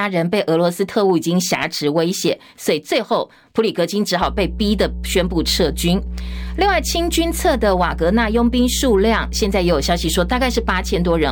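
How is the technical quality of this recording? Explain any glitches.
The recording has one clear fault. From 4.22 s to the end, mains hum appears: a steady 60 Hz tone, fairly loud against the speech. Power-line current is leaking into the signal path.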